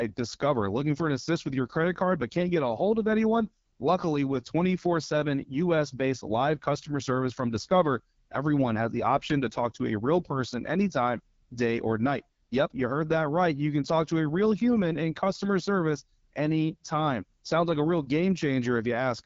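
From start to finish the speech has gone through the AMR wideband (HD Voice) codec, and it's plainly audible. The voice comes out rough and raspy, with that buzzy, gritty edge you get when the pulse-driven vocal tract model is starved of bits. That points to one of the two lowest rates, which fits about 8.85 kbit/s. There's nothing above 7.5 kHz, and the top band above 6.4 kHz sounds like filler noise rather than real detail.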